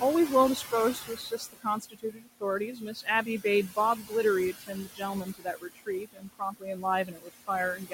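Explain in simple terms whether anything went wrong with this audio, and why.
The noise suppressor treated the room's background noise as something to remove, which leaves noise suppressor artifacts throughout: the noise dips between words and swells underneath them.

It also mistook parts of the speech itself for noise. That speech cut by the noise suppressor makes syllables and word endings sound swallowed or faint at 0.95–2.43 s, 2.68–3.08 s, 3.96–4.12 s, 4.53–5.02 s, 5.24–6.85 s, 7.05–7.3 s, and from 7.76 s to the end. The room noise itself sits well below the speech.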